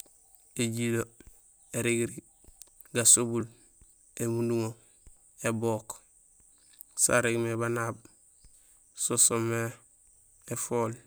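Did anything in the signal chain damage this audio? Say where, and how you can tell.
Yes: a sharp tick at 3.41 s is a block of digital silence, about 1.45 ms of zeros, pointing to a 64-sample driver buffer not filled in time.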